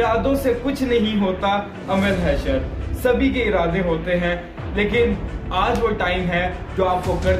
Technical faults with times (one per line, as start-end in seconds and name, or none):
none